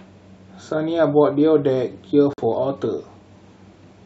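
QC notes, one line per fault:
2.33–2.40 s, corrupt frame muted: the speech drops abruptly into digital silence for about 66 ms, then resumes with timing intact and nothing skipped or shifted. Bit errors in the compressed stream left frames the decoder could not accept, and the player muted them instead of attempting to decode them. The gap's length fits two consecutive frames of roughly 33 ms each, and the muting is why it starts so sharply rather than fading.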